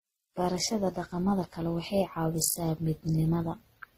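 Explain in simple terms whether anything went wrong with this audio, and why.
From start to finish the speech carries a mix of compression damage layered together, and nothing above 15.7 kHz. This is transcoding between lossy codecs, likely WMA then MP3 then Opus, each squeezing the audio again and adding its own flaws on top of the last.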